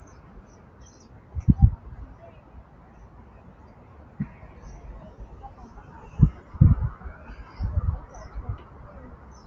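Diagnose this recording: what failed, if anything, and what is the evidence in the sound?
The failure is at the call-processing stage: a noise suppressor tuned for speech was left on while carrying everyday sounds, and it acts across the whole clip. Sustained components and ambience are read as background noise and pulled down, so the level swings by roughly 10 dB. Onsets pass while held portions and decays sink, giving a pumping, thinned texture. The band stops near 8 kHz, which fits the call codec path.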